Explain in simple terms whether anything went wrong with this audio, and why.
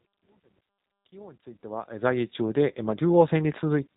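The speech passed through the G.729 codec, a low-rate phone-call format that rebuilds the voice from a simple model and drops everything above 4 kHz, leaving it audibly rough, synthetic and muffled. The gradual fade-in over the first 2.4 seconds is an ordinary edit, not a fault.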